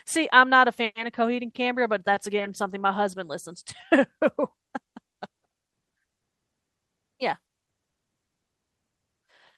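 No technical faults can be heard anywhere in the recording.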